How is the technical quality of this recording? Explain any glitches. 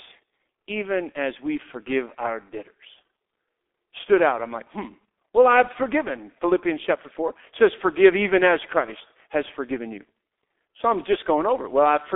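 The quality is poor throughout, with heavy low-bitrate codec damage. G.723.1 codec, across the whole speech clip: long 30 ms frames and a coarse, slowly updated voice model, at a rate that fits about 6 kbit/s, leave speech muffled, hoarse and smeared at consonants. The line band runs from 250 Hz to 3.6 kHz, with nothing above 3.8 kHz.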